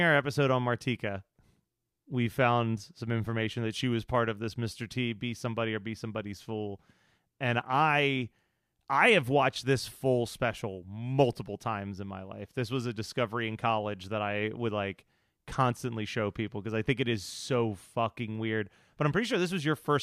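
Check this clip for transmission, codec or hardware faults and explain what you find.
Nothing in the speech recording points to a transmission, codec or hardware fault.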